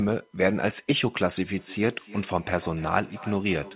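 From 1.58 s to the end of the clip, a feedback echo between two devices sets in. A second device in the room is replaying the call, and this end's microphone picks that sound up again, where this end's echo canceller can't recognise it. Each phrase returns roughly every 300 ms, thinner and ringing, peaking at about 19 dB below the speech. On a spectrogram, faded copies of each syllable repeat at that spacing, all cut off at 4 kHz, which fits a narrowband call codec.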